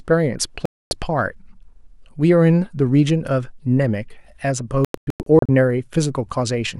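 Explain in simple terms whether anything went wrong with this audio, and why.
Digital broadcast dropouts at 0.66 and 4.85 seconds: the receiver lost the signal and muted until good data returned. The first leaves a quarter-second gap. The second is several short holes over 0.64 seconds, none longer than 0.1 seconds. The missing sound is gone.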